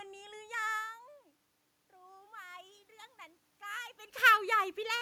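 Automatic gain rising, from 1.91 to 2.88 s: the input dropped by about 20 dB, and the gain control responded by slowly raising its gain by about 4 dB over roughly a second, so the speech and the room noise behind it swell upward together.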